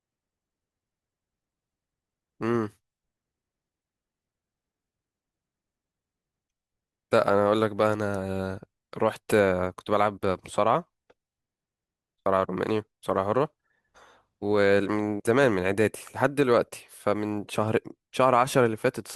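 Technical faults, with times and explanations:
No technical faults can be heard in this recording.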